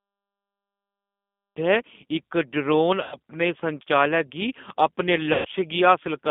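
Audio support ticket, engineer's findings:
Dead digital silence 0 to 1.57 s, then sound drops in mid-sound at 1.57 s with no attack. Cut-off start: capture or stream began late and missed the opening. Check recorder or stream start trigger.

Whole call band-limited to roughly 200 Hz to 3.6 kHz, nothing on top, speech audibly rough and synthetic. G.729 codec (sounds like G.729A at 8 kbit/s) rebuilding speech from a few pulses and a vocal tract filter. Expected for this path.

Smeared, stretched-out stretch fading out at 3.03 to 3.15 s and again at 5.33 to 5.48 s, right after "गी अपने". VoIP packet loss concealed by the speech codec: about 90 ms and 120 ms missing, decoder extrapolating pitch and filter. Check network jitter and loss.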